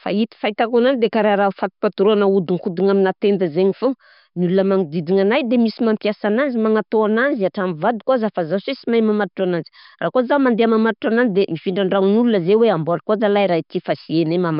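No technical faults can be heard anywhere in the recording. There is nothing here that needs a time marker or an explanation of what went wrong.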